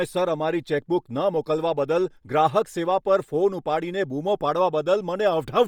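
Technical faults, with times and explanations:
Throughout: Bluetooth LC3 compression, likely the cause. The encoder appears to run at a low rate, consistent with about 32 kbps and 10 ms frames. Not enough bits reach each frame, so the upper spectrum is discarded and refilled with synthetic noise. The speech therefore carries a heavy breathy, grainy edge, and its highs sound hashy rather than clean. Nothing is present above 22.2 kHz.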